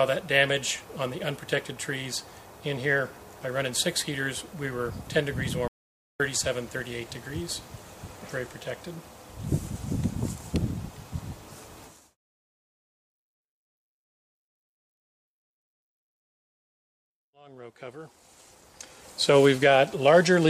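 At 5.68 s the sound cuts off mid-flow and stays silent until it returns abruptly at 6.20 s, an audio dropout to silence lasting about 0.52 s. The gap contains no room tone at all, which points to the input signal being lost, likely through a disconnected device, failed link or momentary mute, while recording continued. Whatever occurred during that half-second is missing.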